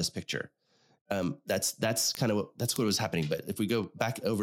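An unlocked digital link lets the receiver's clock drift about 150 ppm from the sender's, so from 0.16 to 4.29 s word clock ticks recur roughly every 0.15 s, about thirty sharp single-sample clicks across the speech.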